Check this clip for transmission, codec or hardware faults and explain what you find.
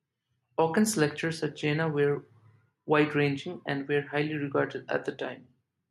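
Nothing stood out on listening to the speech in this clip.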